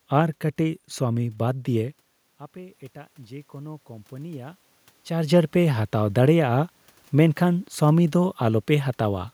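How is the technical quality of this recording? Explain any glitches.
The one glitch is an automatic gain rising from 2.53 to 4.58 s. Around 2 s the talker moves away from the microphone and the input level drops by about 19 dB. The gain control reacts by raising its gain about 5 dB over roughly two seconds, so the voice and the room noise swell up together. The level change near 5 s comes from the talker moving again, not from the system.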